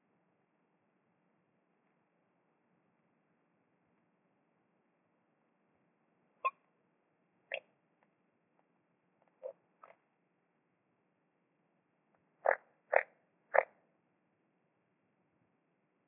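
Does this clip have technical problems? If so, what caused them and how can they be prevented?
No, nothing in this recording of sounds points to a technical fault, so there is no cause to trace and nothing to prevent.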